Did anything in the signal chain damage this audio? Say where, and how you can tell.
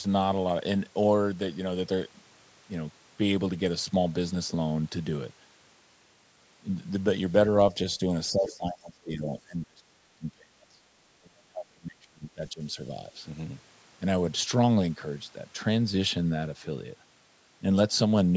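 Yes. Between 8.32 and 10.85 s, and again from 11.19 to 12.77 s, the speech sinks by roughly 30 dB at its deepest, over about 2 s of the first span and 1.5 s of the second. On a waveform the envelope collapses. A spectrogram shows the harmonic bands fading out. The likely cause is speech suppressed in double talk at the call-processing stage: with both sides talking at once, the echo canceller attenuated the near talker along with the loudspeaker echo.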